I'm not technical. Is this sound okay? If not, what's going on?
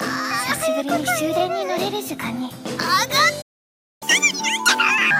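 No. At 3.41 s the sound cuts out and stays silent until 4.03 s, a gap of about 0.6 s. This is a playback stall: the player most likely ran short of data or was briefly held up, so nothing reached the speakers.

From 4.03 to 5.11 s the sound plays one and a half times too fast and noticeably higher, roughly seven semitones up. This is catch-up at higher speed: the player rushes through what it fell behind on, then returns to normal pace.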